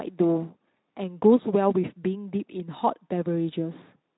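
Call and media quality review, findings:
Nothing to flag on this one; the speech comes through the Speex path as expected, with the audible band topping out around 3.9 kHz.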